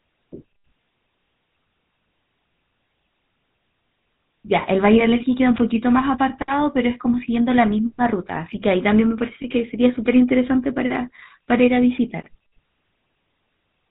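From start to finish the speech carries GSM full-rate codec damage. The vocal tract is modelled and driven by sparse, regular pulses. Little of the excitation survives. Nothing above 4 kHz passes. The result is plainly audible: a buzzy, gravelly roughness, which fits a 13 kbps coder.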